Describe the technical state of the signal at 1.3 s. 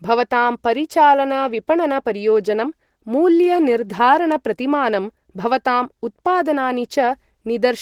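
At 1.3 s you're hearing the same Opus compression damage that runs through the whole speech clip, plainly audible rather than subtle. The speech has that muffled, hoarse, grainy quality, which points to the encoder's hybrid speech mode and a low bitrate around 16 kbps. It's likely down to Opus rebuilding thin bands with folded or noise-filled content instead of leaving holes. The band still reaches up to about 20.4 kHz.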